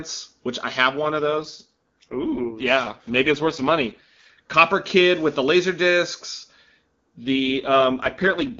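AMR rate drops occur from 1.02 to 4.30 s and again from 7.23 s to the end of the clip. Each time the speech turns rough, buzzy and synthetic, while the bandwidth stays the same and nothing drops out, which points to the AMR-WB link falling from about 23.85 kbit/s to 6.6 kbit/s. A weak radio connection makes the network trade coding bits for error protection. Between the drops the HD Voice sound stays clear, with little or no codec damage.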